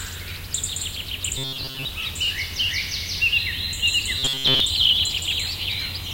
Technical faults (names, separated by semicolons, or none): robotic sound from repeated short buffers